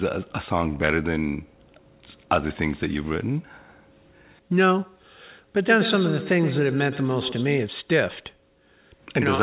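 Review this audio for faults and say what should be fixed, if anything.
From 5.64 to 7.71 s there is feedback echo between two devices: the speech returns at a roughly one-tenth-second interval and reaches about 9 dB below the direct speech. A second device in the room replays this microphone's signal, and this microphone picks it up again; each device's echo canceller removes only its own playback. The audio is band-limited at 4 kHz, consistent with a narrowband G.711 call. Prevent it by keeping only one device joined with its audio active per room, or by muting the other device's speaker and microphone.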